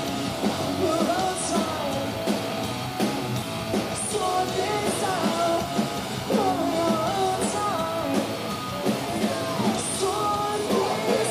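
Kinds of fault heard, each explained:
Low bit depth without dither: A grainy, gritty distortion runs through the whole clip and moves with the sound, so quiet passages turn rough or sputter out. The error sits only about 20 dB below the signal, which fits likely 6-bit rounding without dither.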